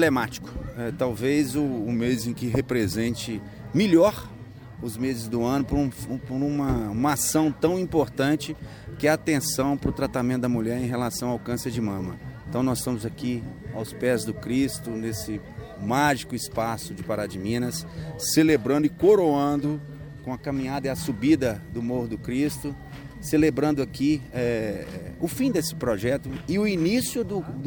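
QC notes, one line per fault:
1.95–3.08 s and 18.00–20.41 s, drift correction step: both times the playback slows by 5.4% and the pitch drops about 96 cents, nearly a full semitone flat, then snaps back to normal at the end. Speed and pitch move together in one jump, which points to a clock-matching resampler that likely stepped its rate down to let its buffer refill. The sudden detuning is the giveaway, especially on anything sustained.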